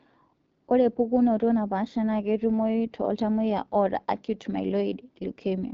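From start to finish the speech sounds rough and raspy, with an audible coarse texture and nothing above about 7.6 kHz. This is the AMR wideband (HD Voice) codec working at one of its lowest rates, which fits 8.85 kbit/s, too few bits for clean speech.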